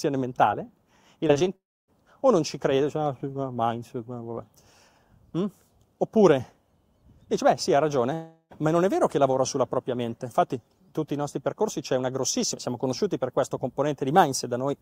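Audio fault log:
1.27–1.48 s, repeated packet loss (robotic sound): four short holes break up the audio, about 80 ms missing in all and none longer than 21 ms. Each hole is patched by stretching the sound just before it, so about a third of this 0.2 s stretch is synthetic filler. The rapid alternation of real and repeated fragments gives a choppy texture with pieces missing.
1.56–1.90 s and 8.14–8.62 s, long network dropout: the audio cuts out for about 0.32 s, then about 0.38 s. In each gap the last sound carries on briefly as a fading buzz or hiss before giving way to silence. In the first gap that silence takes up most of the hole, about 0.28 s. In the second it lasts only about 50 ms. The likely cause is a run of packets that never arrived. When the audio returns, the missing material is skipped, and after the second gap playback lands about 7 ms late.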